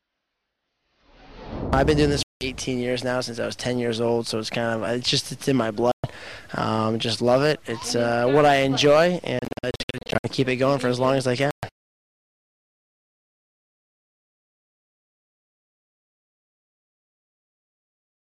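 Abrupt silent gaps at 2.23–2.47 s, 5.92–6.07 s, 11.51–11.65 s, and a broken stretch of short holes from 9.39 to 10.29 s point to likely Bluetooth dropouts. The sound resumes further along, as if it had played on, rather than picking up where it stopped.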